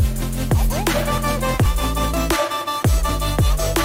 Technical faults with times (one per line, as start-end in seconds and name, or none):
0.22 audio missing between chunks
0.70 audio missing between chunks
1.66 audio missing between chunks
2.14 audio missing between chunks
2.61 audio missing between chunks
3.09 audio missing between chunks